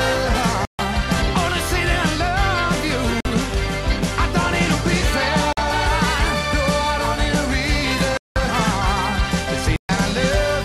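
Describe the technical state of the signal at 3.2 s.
A short hole interrupts the sound from 3.20 to 3.25 s, roughly 46 ms. This is a block of digital silence: the sound cuts out abruptly and returns without any fade, which fits a 2048-sample buffer left unfilled.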